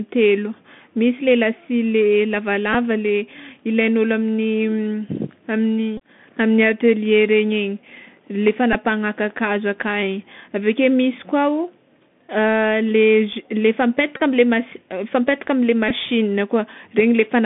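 Speech carried over a Bluetooth headset link using the CVSD codec, a one-bit-per-sample delta coder with an adaptive step size whose 64 kbps stream carries only a narrow line band of roughly 150 Hz to 3.5 kHz. The coder's damage is plainly audible: a granular hiss sits under the speech, s sounds come out scratchy, and loud high-frequency content distorts as it outruns the step size. At 2.73, 5.97–6.00, 8.73–8.75, 14.17–14.20 and 15.89–15.92 s, lost voice packets were covered by decoding the previous packet again. Each Bluetooth headset packet repeated event produces a short buzzy stutter pitched near 267 Hz, the rate at which a 3.75 ms packet repeats. It is briefest at 2.73 s (about 11 ms, fitting three packets) and longest at 14.17 s (about 30 ms, fitting eight).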